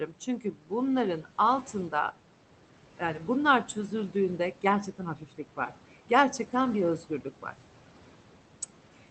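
Noise suppressor artifacts run through the whole clip: the room noise, about 17 dB under the speech, gets pulled down by about 12 dB between phrases. Speech cut by the noise suppressor happens from 0.40 to 0.71 s, where the suppressor mistakes speech for noise and ducks it by up to about 13 dB for roughly a fifth of a second, and again from 4.98 to 5.39 s, right after "yani bunlar çözüldüğünde", with about 11 dB lost over about 0.15 s. Both stretches sound swallowed and faint, all through the Opus call path, whose top end stops around 8 kHz.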